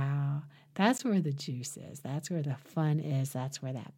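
At 0.98 s the speech drops out for about 15 ms, heard as a brief tick rather than a distinct gap, because the sound jumps straight to zero and back with no fade. This is a block of digital silence: a run of samples was replaced by zeros, most likely because the program failed to fill the output buffer in time, leaving that stretch of samples empty.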